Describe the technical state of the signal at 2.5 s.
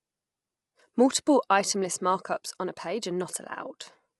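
At 2.5 s the speech carries plainly audible coding damage, present across the whole clip. It sounds rough and grainy. Nothing is left above 11.6 kHz. The likely cause is low-delay AAC compression, AAC-ELD, the codec of video calls. Its short frames of about 10 ms separate pitch harmonics poorly and spend bits fast. Noise fills the gaps between harmonics. The damage fits a bitrate near 32 kbps.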